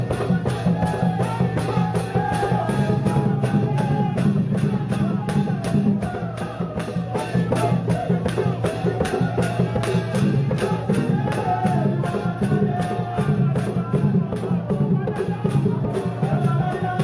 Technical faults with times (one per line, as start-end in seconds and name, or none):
none